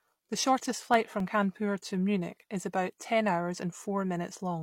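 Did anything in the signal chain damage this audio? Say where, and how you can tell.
Yes: CD scratch ticks from the disc playback stage. Five brief ticks between 0.94 and 1.99 s in the speech, the longest about 1.5 ms, recurring about once per disc revolution as the player conceals unreadable samples. A waveform shows tiny spikes or flattened gaps; a spectrogram shows thin vertical broadband lines.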